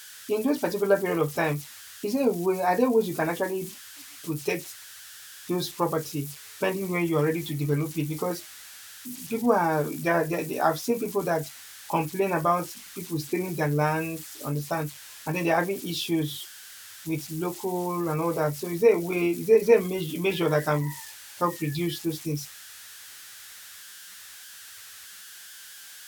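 Throughout the speech, converter idle tones from an undithered delta-sigma stage whistle near 1.5 kHz, about 18 dB below the signal, drawing a thin horizontal spectrogram line through pauses.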